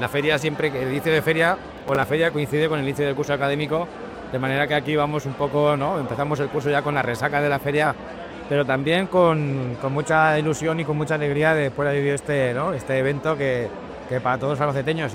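From 1.78 to 2.03 s, processor overload crackle: about five missed buffers of roughly 10 ms repeat stale audio, giving gritty tearing in a clustered burst, unlike a single click.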